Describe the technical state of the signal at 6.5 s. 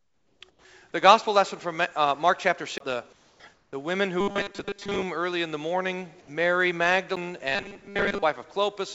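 At 6.5 s the audio is intact, carried through the WebRTC call path with its band ending at 8 kHz, which fits a G.722 call codec.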